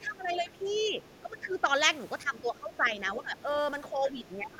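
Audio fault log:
0.00–0.99 s, 1.21–1.70 s, 2.23–3.38 s and 3.91–4.59 s, speech suppressed in double talk: the echo canceller was likely caught with both sides talking at once and could not tell the near talker from the loudspeaker echo, so it pulled the whole microphone signal down. The talker's speech sinks by around 10 dB in these stretches and by around 15 dB in the last one, which runs to the end.
0.31–0.35 s, 0.57–0.76 s and 1.05–1.53 s, other side's voice leaking through: the far end's audio, played out of the loudspeaker, was likely not fully cancelled before the microphone signal was sent on. A second, faint voice sits roughly 30 dB under the talker. It is a short scrap at 0.31 s, then longer pieces, the last lasting about half a second.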